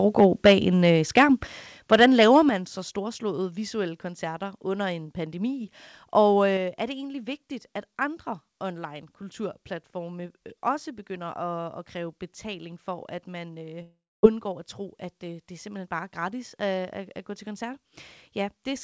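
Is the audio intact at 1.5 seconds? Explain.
No, not quite. Right around 1.47 s the speech and the background both drop by about 5 dB in a single step. That's likely the microphone volume being stepped down, with the call software cutting the input gain once after judging the mic too hot.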